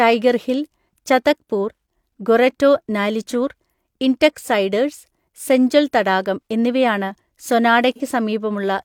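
AAC frame loss with concealment occurs at 7.96 to 8.00 s, a gap of about 43 ms, which fits a single missing AAC frame. With nothing to decode for that stretch, the decoder improvised by reusing the spectrum of the last good frame, randomising its phases or smoothing its energy to bridge the hole. Because the dropout is this brief, the speech doesn't fade toward silence. It turns into a short smeared, noisy, phasey blur before normal decoding resumes.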